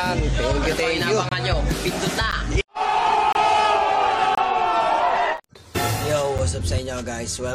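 Gaps between stream segments occur at 1.29–1.32 s, 2.31 s, 3.33–3.35 s, 4.35–4.38 s, 5.37 s and 6.38 s, roughly once per second, matching 1-second segments. At each boundary, the time stamps of consecutive segments leave a small hole that the player fills with silence. Each sounds like a hard-edged dropout, about 26 ms for the first, third and fourth, and 7 to 13 ms for the others. Nothing is removed; the silence simply pushes the following sound later.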